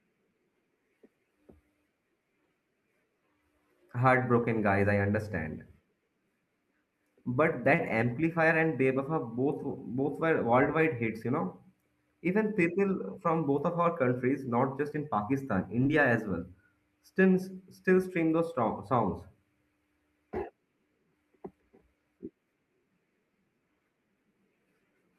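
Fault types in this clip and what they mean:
Short stall from a late packet: at about 7.75 s a packet arrived late, the jitter buffer ran dry, and the receiver held the last bit of speech for roughly 30 ms until it caught up, then resumed from exactly where it stopped. Nothing is lost, but everything after plays about 30 ms later. That is what separates it from concealed loss: the sound is stretched with a slight buzz or dip, not skipped.
Short concealed packet loss: at about 15.83 s, just before "as well still", around 20 ms of speech never reached the decoder. The receiver filled the gap with about 15 ms of synthesized continuation and blended back in, so a brief smear or wobble replaces the real audio. Unlike the late-packet stall, material is actually missing and the timing moves about 5 ms earlier afterward. The speech jumps slightly ahead rather than pausing in place.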